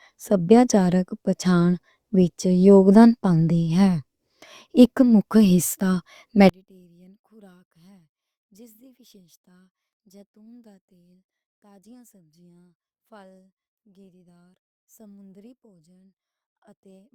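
One channel inverted, from 6.49 s on: the mono speech drops about 35 dB to a faint trace, likely from reversed polarity cancelling the shared centre.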